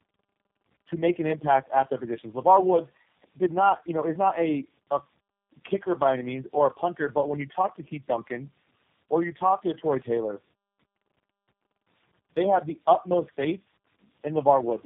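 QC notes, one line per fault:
Throughout: tandem speech coding. The speech sounds rough, muffled and warbly, with nothing above 3.5 kHz. The layered artefacts fit three low-rate speech codecs in a row, with the last stage consistent with G.729A at 8 kbit/s. The signal was decoded and re-encoded at each link border, so each coder compressed the previous coder's damage. The distortion compounds, and the result is worse than any single one of these codecs would produce.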